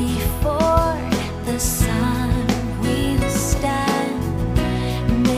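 No audible technical faults anywhere in the recording.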